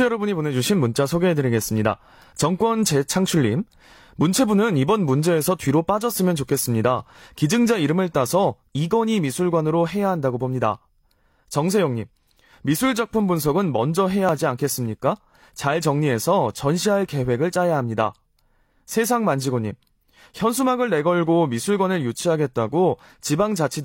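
At 2.33 s the speech skips forward. About 33 ms of audio is missing, and the waveform jumps across the gap. This is an overlap between stream segments: two adjacent segments had overlapping time stamps, so the player trimmed the overlap from audio that was never duplicated. The same fault returns at 14.29 s, removing about 28 ms. The stream is cut into 6-second segments.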